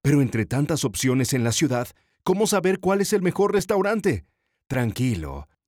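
At 4.74 s the speech drops out for about 5.8 ms in a block of digital silence: a stretch of samples is silenced, which fits a 256-sample buffer that the audio process failed to fill in time. The signal jumps to zero and back with no fade, so the gap is heard as a tick or dip. On the waveform this appears as a flat line at zero, and on the spectrogram as a thin blank column edged by full-band vertical streaks.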